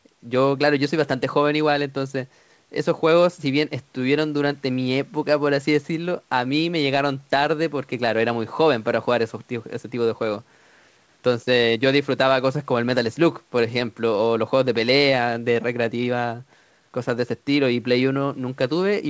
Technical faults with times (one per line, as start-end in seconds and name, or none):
none